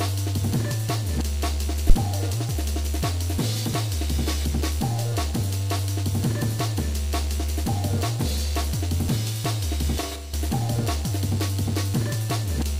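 Phantom power thump, from 1.90 to 1.96 s: a low-frequency thump that dies away in about 14 ms. It happens when phantom power or another supply is switched on or off while the input is live. The sudden voltage step passes through the input's coupling capacitors as a single transient, which then drains away. That leaves a brief thud sitting on top of the audio rather than any sound from the source.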